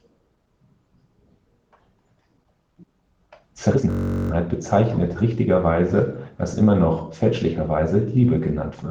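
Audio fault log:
2.94–4.49 s and 7.78–8.24 s, jitter buffer speed-up: the receiver's jitter buffer was holding more audio than its target, so it repeatedly cut out short pieces one or a few pitch periods long to catch up. The first stretch plays at 120% speed and sheds about a fifth of a second, so the speech sounds clearly hurried at unchanged pitch. The second runs at 107% and drops only a few tens of milliseconds, a slighter rush.
3.90–4.31 s, system hang loop: the system froze while the sound hardware kept replaying the same ring buffer. One 21.33 ms slice repeats exactly, 19 times, which fits a 1024-sample buffer. Because the slice is so short, the repeats fuse into a steady buzz at 46.9 Hz rather than a stutter. It sits inside the first speed-up, and almost no audio goes missing around it.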